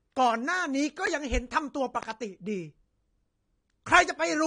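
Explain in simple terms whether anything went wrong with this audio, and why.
The speech has a dull, swirly, fizzy sound throughout, with nothing above about 9.7 kHz. That points to AAC compression, likely at a low quality setting. Simple muffling would not add that warbly texture.

There are loud pops: one sharp, strong pop at 1.07 to 1.09 s, then two softer pops in quick succession at 2.03 to 2.13 s. The likely cause is an electrical jolt such as a plug, switch or static. Speech carries on underneath, so nothing is lost, unlike a dropout.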